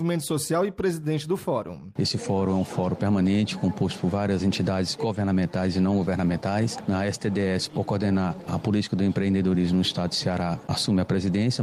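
No technical faults are audible.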